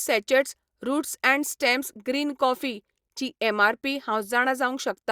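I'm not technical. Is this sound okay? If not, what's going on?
Yes, this sound is okay, and nothing is going wrong with it.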